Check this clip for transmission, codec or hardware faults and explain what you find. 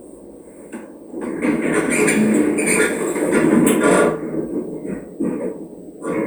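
No transmission, codec or hardware faults are audible anywhere in this recording.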